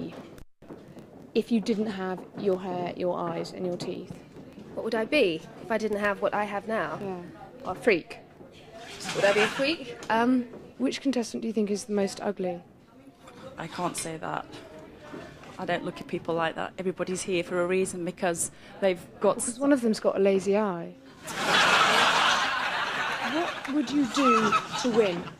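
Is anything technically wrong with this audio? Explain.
No, nothing technically wrong stands out here; it all sounds just as it should.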